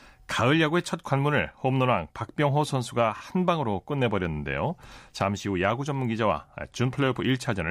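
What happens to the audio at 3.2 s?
Between 3.15 and 3.21 s the speech stutters from repeated frames. A block of about 26 ms, which points to a single compressed frame, is played two extra times, stretching the audio by 52 ms. It sounds like a brief stutter. On a spectrogram the same thin slice appears three times in a row. The waveform shows an identical short pattern tiled back to back.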